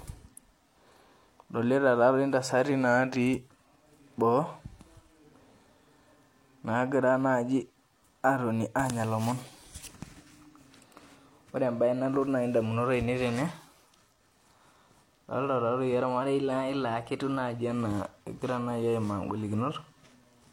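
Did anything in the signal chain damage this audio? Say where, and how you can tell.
Yes. At the buffer stage, a drift correction step likely resampled the speech to resync two clocks. From 2.71 to 3.45 s the playback rate drops by 5.8%, so speed and pitch fall together by about a semitone (−103 cents) before snapping back. From 16.22 to 17.58 s the opposite happens: the rate rises 5.8% and pitch climbs roughly 98 cents. The abrupt entry and exit, with no gradual glide, is the sign of an adaptive rate converter changing its ratio in one step.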